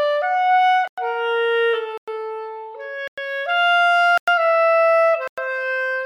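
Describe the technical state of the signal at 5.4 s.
Just before 5.4 s, a gap between chunks leaves a 100 ms hard-edged silence from 5.28 to 5.38 s, at the join between 1-second chunks, interrupting the sound without losing any of it.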